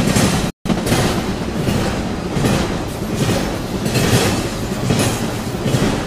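At 0.50 s the sound cuts out in mid-flow. It stays silent until 0.66 s, a gap of about 0.15 s. This is a playback stall. The player likely ran short of data, or its output thread was held up, so nothing reached the output for that stretch. The break is abrupt and clearly audible.

From 0.66 s to 0.96 s comes a time-compressed catch-up. The player clears the backlog left by the gap. It drops small slices of audio and cross-fades across the joins. This runs the sound at about 1.5 times normal speed. The pitch does not rise, but the passage sounds hurried.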